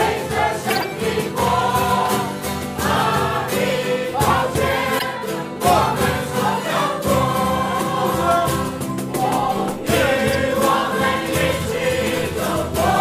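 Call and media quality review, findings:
Corrupt frame decoded: chirp, squeak or noise bursts at 0.70–0.84 s and 4.99–5.04 s. Decoder played bit-damaged frames (several, then a couple), misplacing energy in frequency, peaking near -10 and -5 dBFS.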